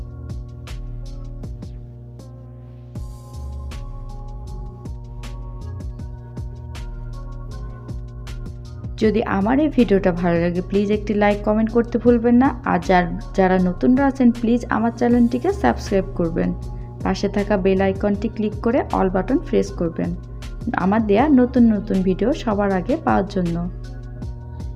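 A steady low drone runs underneath the audio from start to finish, a 60 Hz mains hum sitting only about 15 dB below the programme. It comes from power-line current leaking into the signal path, through a ground loop or a transformer close to the cabling.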